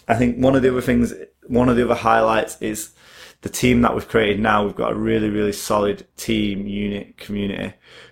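Overlap-add ripple runs through the whole of this speech from start to finish. The signal was split into windowed frames and rejoined with an overlap whose windows don't add up to a steady gain, so the level swells and dips once per frame, by about 6 dB, at roughly 150 times a second. At that rate the pulsing fuses into a metallic buzz, with extra tones around the voice.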